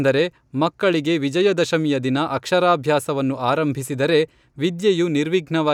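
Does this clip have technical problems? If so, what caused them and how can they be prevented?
No, there are no technical faults in this speech recording, so there is nothing to trace back or prevent.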